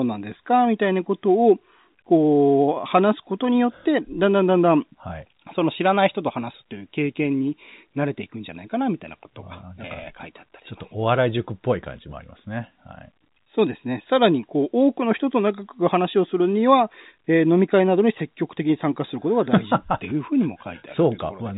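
No technical faults can be heard in this speech, which comes through G.711 telephone coding with nothing above about 3.8 kHz.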